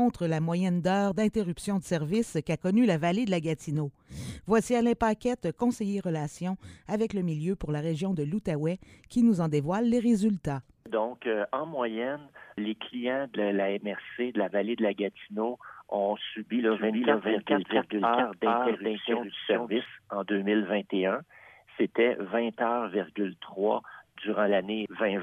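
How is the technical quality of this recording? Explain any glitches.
One fault affects the recording: a doubled audio track from 16.7 to 19.9 s. A second capture path or an out-of-step edit likely mixed in another copy. That full-band copy trails the original by roughly 400 ms at nearly equal loudness, with no room colour, switching on and off abruptly.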